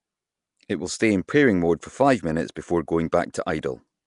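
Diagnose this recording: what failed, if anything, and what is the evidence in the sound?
Throughout, the speech carries a rough, hissy halo and a smeared, underwater quality, and nothing is present above 10.6 kHz. These are plainly audible codec artefacts, likely from Nellymoser compression, the old Flash microphone codec, at a rate that fits about 44 kbps. It codes short blocks with a fixed, small bit budget per sample, so weaker bands get no bits and are replaced by noise. That noise fill is the hiss that clings to the speech.

At 1.27 s, between "will stay in" and "mode for", a short burst of hiss about 11 ms long comes just before a sharp onset, which sounds softened rather than crisp. This is pre-echo, also a codec-stage fault. The attack landed late in a transform block, and the quantisation noise sized for that loud moment was spread across the whole block, so it fills the quiet stretch before the attack.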